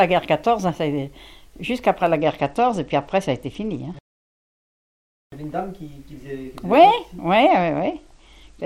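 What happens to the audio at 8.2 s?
At 8.2 s the sound sits inside a Bluetooth SBC bit pool drop running from 7.49 s to the end. The starved encoder gives the top sub-bands few or no bits and quantises the rest coarsely, consistent with a bit pool falling from 28 to 11, so treble dulls and gritty noise rises. A spectrogram shows the upper bands thinned out.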